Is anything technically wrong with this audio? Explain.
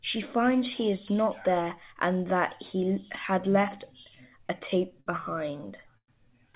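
Yes. There are repeated stalls (stutter) in two stretches, 4.04 to 5.08 s and 5.66 to 6.10 s. Packets reached the receiver late or more slowly than playback consumed them, so the jitter buffer kept running dry. The receiver stretched the last sound to cover each wait. The first stretch has nine brief holds totalling 144 ms, none over 59 ms. The second has four totalling 138 ms, one lasting 108 ms and likely faded. No speech is lost, but it drags and stutters. All of it sits in a telephone band with nothing above 4 kHz, which fits a G.711 mu-law call path.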